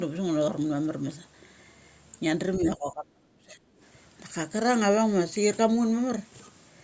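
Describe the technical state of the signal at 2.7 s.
At 2.7 s the speech is caught in a dip that runs from 2.6 to 3.6 s, and it sounds like speech suppressed in double talk. The level sinks hard, by about 30 dB at its deepest, so the talker dips for roughly a second. The likely cause is the echo canceller hearing both sides at once, failing to tell the near talker from loudspeaker echo, and clamping down on everything.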